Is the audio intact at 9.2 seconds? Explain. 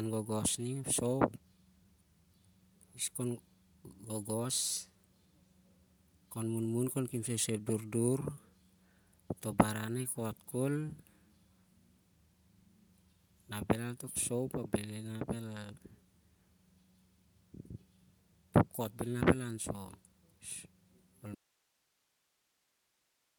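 No. At 9.2 s, as across the whole recording, the speech has likely passed through Bluetooth LC3 compression. Coarse coding in transform frames, consistent with 10 ms blocks at around 48 kbps, leaves a plainly audible breathy, grainy edge, and nothing lies above about 20.1 kHz.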